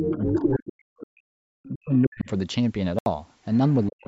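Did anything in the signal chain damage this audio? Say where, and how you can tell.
Yes. Call processing: the other side's voice leaking through, loud at 0.0 to 0.48 s, faint at 1.63, 1.95 to 2.23 and 3.54 to 3.87 s. Likely an incomplete echo canceller.

Speech is suppressed in double talk from 0.0 to 1.47 s, 1.68 to 2.3 s and 3.87 s to the end. It drops roughly 40 dB, likely from echo suppression.

A Bluetooth dropout leaves a 75 ms silent hole from 2.99 to 3.06 s, and the sound resumes as if it had played on. This likely fits four lost packets.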